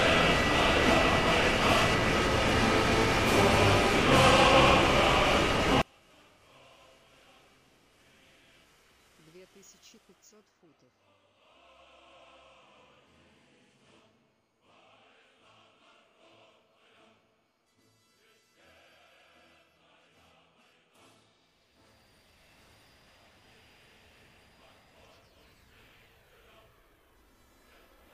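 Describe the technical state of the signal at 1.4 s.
At 1.4 s the signal is intact, with no dropout, distortion or other fault to be heard.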